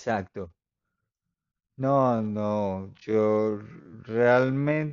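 Time-stretched section from 1.93 s onward: speech suddenly slows to half speed at unchanged pitch, sounding dragged, likely from software repeating brief slices.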